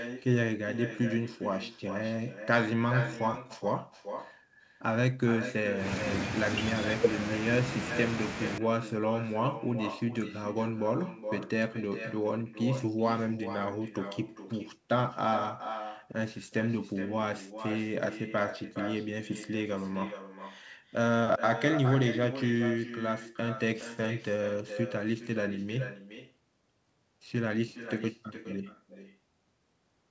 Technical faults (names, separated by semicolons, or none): echo with no canceller